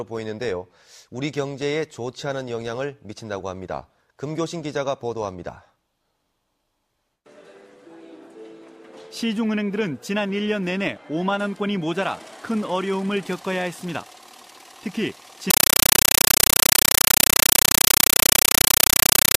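At 15.50 s the sound gives way to very loud, chattering static that runs to the end at 19.38 s. That's a compressed stream played as audio. What sounds like undecoded AC-3 is being treated as plain samples, so each frame comes out as an 8 ms noise burst followed by silence, 31.25 times a second.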